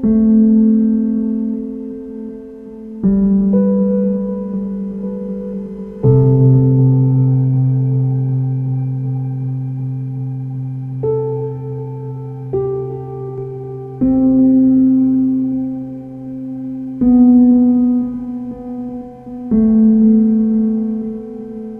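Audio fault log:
Nothing here to flag, the audio just runs along with no technical trouble turning up anywhere.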